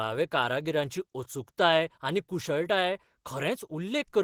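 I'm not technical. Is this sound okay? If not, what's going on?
No. The speech sounds hoarse, rough and grainy from start to finish, likely from Opus compression; unlike MP3's swirly, watery artefacts, this damage is a steady graininess.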